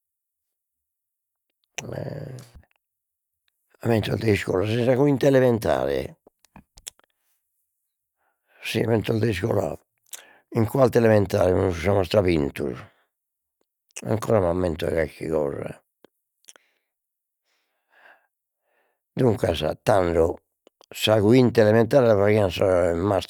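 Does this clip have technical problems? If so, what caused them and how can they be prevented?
No, the speech in this clip shows no technical faults, so there is nothing to trace to a cause or guard against.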